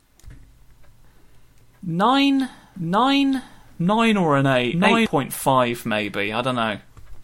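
Speech with a doubled audio track from 2.76 s to 5.06 s: a second full-band copy runs about a second behind at roughly equal level, with no decay or room colour, and cuts in and out abruptly, likely from a slower second capture path.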